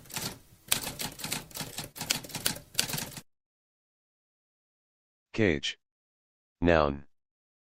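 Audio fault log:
1.73–1.78 s and 1.92–1.96 s: short concealed packet loss, 20 ms gaps refilled by extending the preceding sound; a brief smear, seen as smoothed, repeated spectrogram texture.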